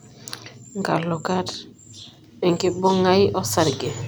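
No technical faults can be heard to describe at any point in the recording.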